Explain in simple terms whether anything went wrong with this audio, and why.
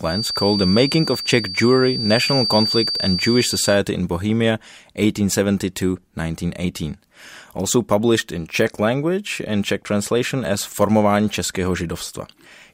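Something did go wrong right at the start. From 0 to about 3.81 seconds there's a thin, high whistle sitting behind the speech, around 4.6 kHz, only a little quieter than the talking and swelling and fading slowly in loudness. That's a feedback whistle. The likely cause is the loudspeaker's sound leaking back into the microphone and looping round, balanced just on the edge of feedback so one pitch keeps ringing without building into a full howl.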